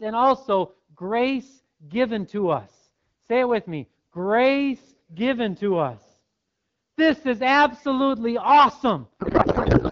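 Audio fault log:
9.19 to 9.91 s, codec payload misread: The last stretch of speech suddenly turns to garbled noise and warble that barely tracks the talking. The decoder is reading frames that look valid, but the bits sit in different places than it expects. The fit points to octet-aligned AMR being unpacked as bandwidth-efficient. Before this, the AMR wideband (HD Voice) codec sounds clear with light coding damage, consistent with about 12.65 kbit/s. The garbling runs to the clip's end.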